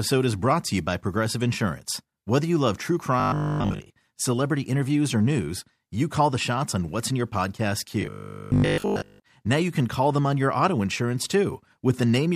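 Robotic sound from repeated short buffers at 3.20 to 3.92 s, after "you love true", and 8.02 to 9.26 s, after "what's in your podcast": a 50 Hz metallic buzz, likely from audio arriving late so a 20 ms chunk is looped, replacing most of the first passage and all of the second.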